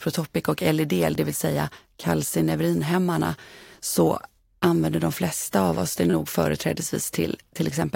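At 1.15 s, just before "det vill säga kalcineurinhämmarna", there's a repeated buffer. Fresh audio didn't arrive in time, so the device replayed its last chunk once more. The chunk is only about 11 ms, which fits a 512-sample buffer, so it comes across as a quick click rather than a stutter. It happens again from 6.10 to 6.13 s, right after "flesta av oss det". This time the chunk plays three extra times, giving a short buzzy stutter. Nothing seems to drop out either time.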